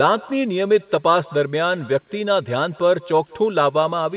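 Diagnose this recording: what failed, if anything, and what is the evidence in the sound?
Call processing is what failed here. The far end has no echo canceller, so its loudspeaker feeds straight back into its microphone and the speech returns to us. From start to finish every phrase is trailed, around a fifth of a second later, by a faint, thin copy about 24 dB down. That delay is the network round trip. The sound tops out at 4 kHz, which fits a G.711 A-law call leg at 64 kbps.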